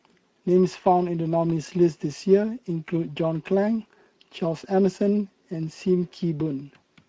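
From start to finish the speech has passed through the Speex codec, a CELP coder from older VoIP and game chat, which fits a mid-to-low quality setting of around 16.8 kbps. At that rate the encoder has too few bits to describe the excitation signal faithfully, so it substitutes a coarse approximation. The result is plainly audible: the voice comes across grainy and hoarse, with a rough, noisy edge replacing the natural texture of the speech.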